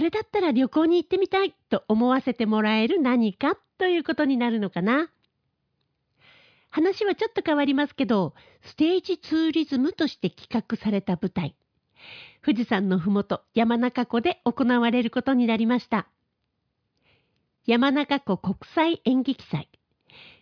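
Listening closely to the speech, nothing stood out as a technical fault at any point.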